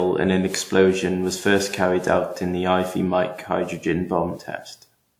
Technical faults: generation loss

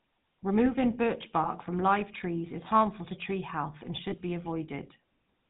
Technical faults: GSM full-rate codec; lost GSM frames

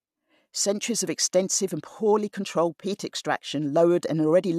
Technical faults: none

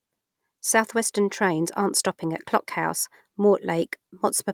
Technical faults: none

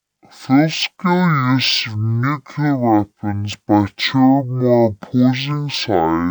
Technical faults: stereo read as mono

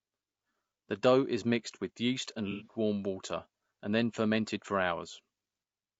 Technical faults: low-delay AAC compression; AAC frame loss with concealment

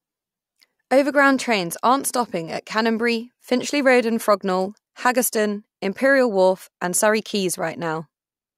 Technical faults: none

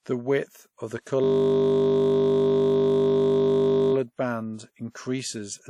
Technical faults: WMA compression; system hang loop

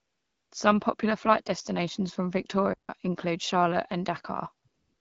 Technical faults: AMR comfort noise; playback stall

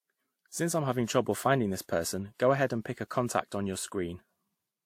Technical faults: transcoding between lossy codecs

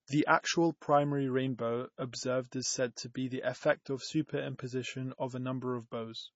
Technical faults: MP3 compression

